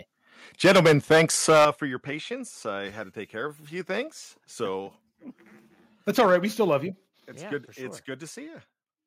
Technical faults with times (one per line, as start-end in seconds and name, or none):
0.64-1.68 microphone overload
0.66 microphone volume stepped down
1.65 microphone volume stepped down
6.18-6.36 microphone overload
6.21 microphone volume stepped down
6.72-6.74 microphone overload
7.20 microphone volume stepped down